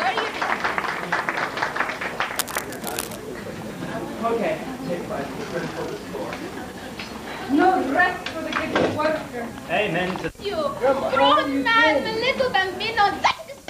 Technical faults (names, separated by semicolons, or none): cable scratch noise